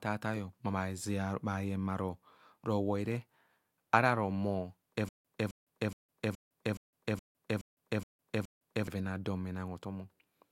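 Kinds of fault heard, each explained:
Stutter with silent gaps: from 5.09 to 8.87 s a 263 ms chunk of speech replays nine times with 157 ms of silence between, likely a stalled stream retrying.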